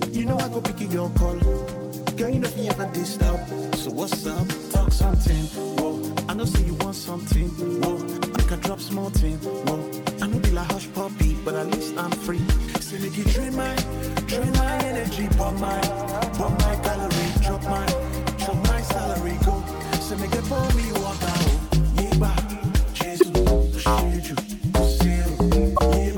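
At 8.32 to 8.37 s, 23.19 to 23.23 s and 25.75 to 25.79 s there are short garbled blips of roughly 45 ms each, the mark of damaged data in a compressed stream. Bytes in the encoded file were wrong, so the decoder misread those frames and had to resynchronise on the next valid header.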